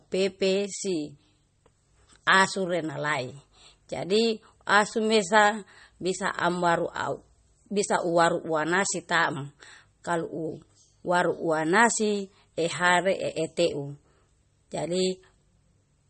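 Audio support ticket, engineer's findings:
Speech, whole clip: treble gone above 8.4 kHz, watery swirl on sibilants. Likely MP3 compression at a low bitrate near 32 kbps. Flickering weak bands, unlike a clean low-pass filter.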